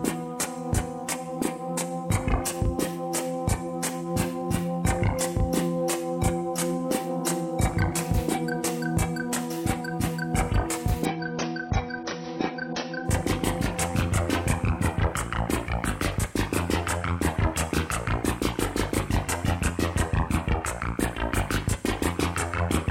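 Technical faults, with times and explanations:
11.05–13.05 s adaptive stream at a lower bitrate: sudden, gapless loss of everything above 6.6 kHz with codec swirl, which fits a brief switch to a much lower-bitrate AAC version.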